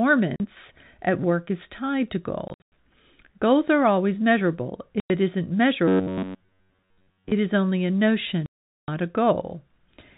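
At 0.36 s, 2.48 s, 5.0 s and 8.46 s, packet loss filled with silence punches hard-edged holes into the speech. The gaps last 40 ms, 180 ms scattered over 240 ms after "work is tied to", 100 ms, and 420 ms after "is only a". All are multiples of 20 ms, which fits 20 ms packets. Between 5.88 and 7.33 s, from "it isn't" until "is only a", the speech becomes a rigid metallic buzz at 93.8 Hz that loosely follows the words. This is robotic sound from repeated short buffers, likely caused by a buffer of roughly 10.7 ms being replayed over most of that stretch while the real audio is skipped. The G.711 telephone band limit of 4 kHz is present throughout.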